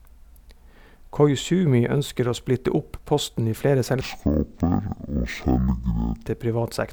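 Right after "opp posten i flere", at 4.01 s, the speech drops to half speed and a full octave down, and it stays that way until 6.27 s, just before "til privat". That's stereo read as mono: the left and right samples, which alternate in the file, get played back in sequence as one channel, so everything stretches to twice its length. You can also catch a faint mirrored copy of the sound sitting up in the top half of the spectrum.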